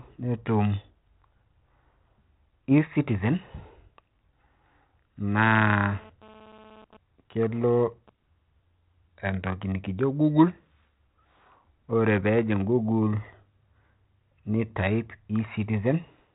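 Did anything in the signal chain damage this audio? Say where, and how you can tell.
Yes. From 5.61 to 8.10 s, a hard, raspy GSM phone buzz, about 26 dB below the speech, enters the analogue wiring as a nearby 2G phone's 217 Hz transmission bursts are rectified. It comes and goes, as during a data transfer. Unlike mains hum, it is not at 50 or 60 Hz and is dense with harmonics.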